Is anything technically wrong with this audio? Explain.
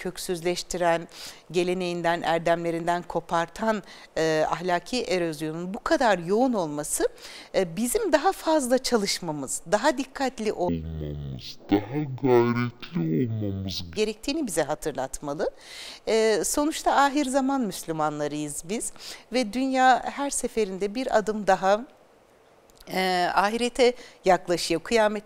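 Yes. From 10.69 to 13.96 s there's stereo read as mono: interleaved left-right samples get played as one channel, so the sound drops to half speed, an octave low.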